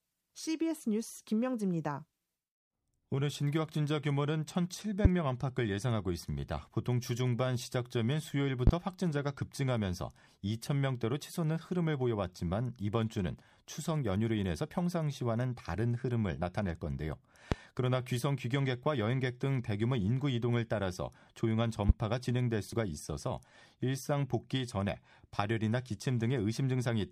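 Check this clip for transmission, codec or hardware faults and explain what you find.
Four loud pops cut through the speech, at 5.05–5.09 s, 8.67–8.71 s, 17.52–17.55 s and 21.89–21.93 s. Each is a single sharp crack, roughly 20 dB above the speech, which continues underneath. A sudden voltage spike, likely from a connector, switch or static discharge, is being added to the signal.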